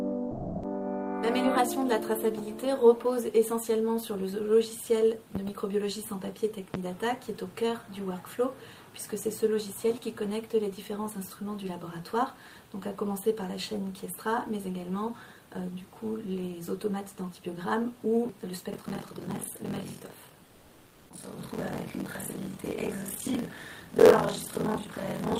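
From 0.31 to 0.63 s, 320 ms of sound is dropped by the voice detector, likely Opus DTX. It is replaced by comfort noise until the detector triggers again.

At 5.35 to 5.51 s there is a double loud pop, about 10 dB above the signal. A single pop follows at 6.74 to 6.78 s, about 15 dB above. These are isolated thumps with the sound continuing underneath, unlike a repeating rattle.

From 18.72 s to the end, buffer tearing produces a robotic buzz at 43.1 Hz, which fits a 1024-sample buffer. Roughly half of each period replays audio from about 50 ms earlier, and the buzz is present only while there is signal.

Within that stretch, from 20.45 to 21.09 s, comfort noise replaces the background for 640 ms. The background's detail gives way to featureless noise with a level change of only about 1 dB. Unlike the earlier dropout, no foreground sound is lost here.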